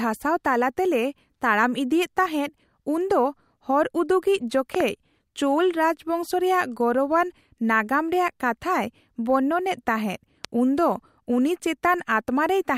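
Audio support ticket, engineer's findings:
Loud pop, two pops in quick succession at 4.75–4.83 s and a single pop at 10.45–10.47 s, each around 15 dB above the speech, which continues underneath. Likely cause: a voltage step from a connector, switch, static discharge or driver glitch, shaped by downstream circuitry.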